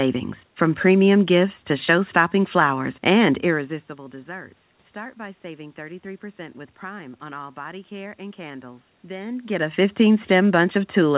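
This speech clip has no technical fault. The sound stops at 4 kHz, which fits a G.711 A-law call path at 64 kbps, and the level shifts at about 3.5 s and 9 s come from the talker moving relative to the microphone.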